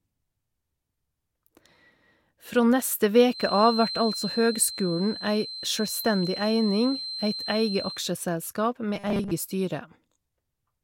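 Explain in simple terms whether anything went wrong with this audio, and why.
From 3.26 to 8.07 s, a steady 4.1 kHz feedback whistle sits beneath the speech. A speaker-to-microphone loop likely kept ringing without becoming a howl.

From 8.95 to 9.32 s, the speech turns into robotic sound from repeated short buffers, with a fixed 200 Hz buzz. Most of that stretch was likely short slices being repeated.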